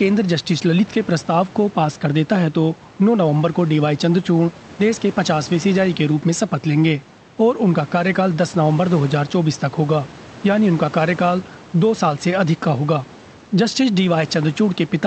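No technical faults can be heard anywhere in the speech. A faint room noise sits about 23 dB below the voice, and the call codec's band limit shows as an absence of content above about 8 kHz, which fits Opus running at a wideband setting.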